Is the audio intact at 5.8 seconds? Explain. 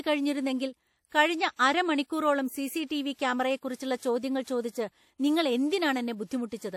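No. At 5.8 seconds the speech carries the same damage heard throughout the clip, likely WMA compression at a low bitrate, which fits a 48 kbps stream. The transform codec spreads quantisation noise across each long block and drops weak spectral lines, so the sound rings and washes with a hiss that breathes with the speech. A spectrogram shows a hard ceiling at 17 kHz, patchy holes between components, and smearing around onsets. The waveform shows noise before transients.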